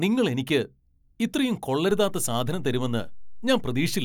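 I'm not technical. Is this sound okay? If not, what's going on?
No, not quite. At about 1.91 seconds there's a DC step: the baseline the whole waveform sits on suddenly shifts to a new level, a bit like the floor under the sound jumping a notch. You hear that jump as a single low thump or click, while the speech itself carries on unchanged. The shifted level then holds right through to the end of the clip instead of settling back.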